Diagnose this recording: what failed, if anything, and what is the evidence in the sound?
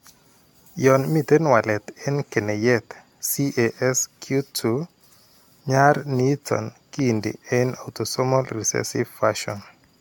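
Throughout the speech, the sound has a swirly, hollow quality with smeared consonant attacks, and nothing is present above 17 kHz. This points to the codec stage, and the likely cause is generation loss. The audio seems to have been encoded around four times, in a way that fits AAC-LC at 96 kbit/s. Each re-encode quantises on a shifted frame grid, so the spectral holes and noise build up. A single encode at that rate would sound cleaner, so this is not simply a low-bitrate encode.

At 6.99 to 7.01 s there is one sharp pop, peaking about 5 dB above the speech, while the speech carries on underneath without a gap. This points to the analogue wiring or driver stage. The likely cause is a loud pop from a voltage step or pulse, such as a plug, a switch or static, which the following circuitry shapes into a brief click. Because the sound continues unbroken through the pop, this is an added transient and not a dropout.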